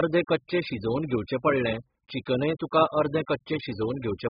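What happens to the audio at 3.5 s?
At 3.5 s the speech sounds dull, smeared and warbly, with fizzy sibilants and nothing above 5.1 kHz. The damage runs through the whole clip and likely comes from AAC compression at a very low bitrate, around 8 kbps, which trims the top band and quantises coarsely.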